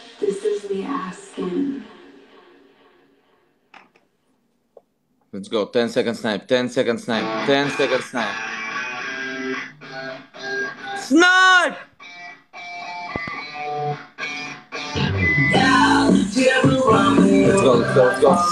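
At 13.16 to 13.30 s there's a loud pop, two quick thumps well above the sound, which keeps going underneath, likely a plug or switch transient.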